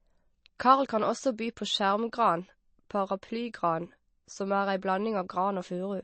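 Throughout the speech, the sound has a watery, swirling quality, with weak frequency components flickering in and out. This is likely MP3 compression at a low bitrate around 32 kbps.

At 1.38 s, a brief hiss of about 10 ms arrives just before a sharp attack. This is pre-echo: the codec spread quantisation noise sized for the loud onset across its whole block, filling the quiet gap before it. Unlike a click, the noise comes before the attack, and the attack itself sounds softened.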